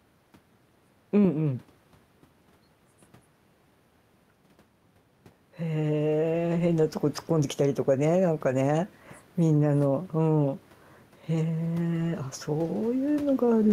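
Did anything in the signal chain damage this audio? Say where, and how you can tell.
Yes. Throughout the clip the gain swings by around 10 dB, while the speech itself sounds squashed, with loud and quiet syllables pressed close together. That is gain pumping. It likely comes from the input stage: the microphone gain is set far too high, and a fast limiter or compressor clamps down on each loud sound. The room noise sits about 32 dB below the speech.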